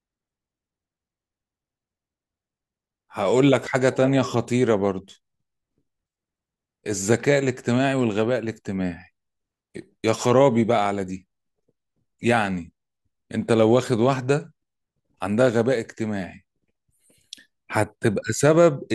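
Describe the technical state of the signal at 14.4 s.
The signal at 14.4 s is intact, with no audible fault at that point in the speech.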